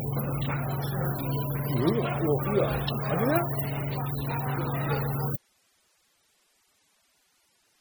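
From the first moment, the audio carries MP3 compression, likely from an encoder starved of bits, with the heavy damage pointing to a rate around 32 kbps. With so little to spend, the encoder drops weak frequency lines and lets them flicker in and out between frames. The result is a watery, swirling texture over the whole clip, with metallic chirping on bright, noisy detail and transients that smear instead of striking cleanly.

At 5.36 s the wanted signal stops, and what remains through to the end is an audio dropout to a faint residue. The signal feeding the chain was likely lost while the path after the break stayed live. The cut is abrupt rather than a fade or natural pause, and the gap holds only hiss, sitting roughly 40 dB below the level the sound had before.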